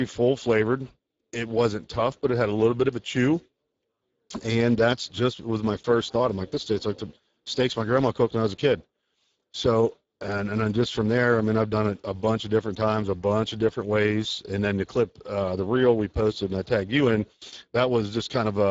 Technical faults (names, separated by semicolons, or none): Speex codec